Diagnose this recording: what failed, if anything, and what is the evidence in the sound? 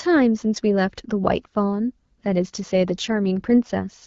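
From 2.69 s to 4.06 s the speech turns rougher and more synthetic, with no gap and an unchanged band. This is an AMR rate drop at the codec stage, driven by the network: the AMR-WB link falls from 12.65 to 8.85 kbit/s, trading speech detail for error protection.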